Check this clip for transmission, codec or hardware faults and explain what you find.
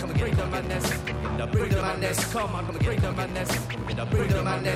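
Three skips are audible. A dropped buffer (overrun) is the likely cause at 1.81, 2.69 and 3.93 s: samples were overwritten before being read, so each point jumps ahead, losing roughly 40 ms, then about 70 ms twice.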